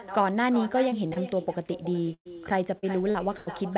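It's a short speech clip on a call, and the whole thing carries an echo with no canceller: the far end is playing the call out loud, its mic picks it back up, and nothing strips it out, so every phrase comes back around four tenths of a second later as a thinner copy about 12 dB down. Then there's short concealed packet loss, first at 0.90 s, a quick smear lasting a few hundredths of a second, and then two back-to-back holes from 1.08 to 1.18 s. In each case a chunk of audio didn't reach the decoder in time, so the receiver stretched the last bit of sound to cover it and faded back into the real signal, which you hear as a brief wobble rather than a clean gap. From 2.14 to 3.49 s it turns into repeated packet loss with that robotic sound: five holes in quick succession, the longest about 114 ms, with close to a quarter of the stretch patched over. Each patch just extends what came before, so the sound goes choppy with pieces missing. 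Nothing above 4 kHz comes through, which fits a narrowband telephone codec like G.711 mu-law on the call path.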